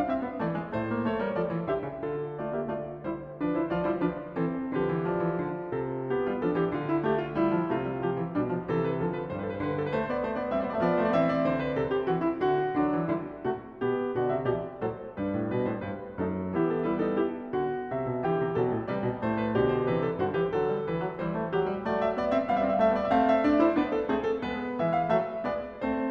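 No technical faults are audible.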